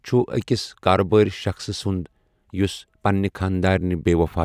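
Nothing stood out on listening to this speech recording.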